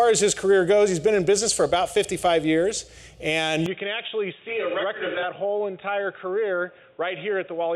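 At 3.66 s the input likely switched to a poorer device: the audio then loses everything above 3.8 kHz, turning dull and boxy, slightly quieter, with faint new noise.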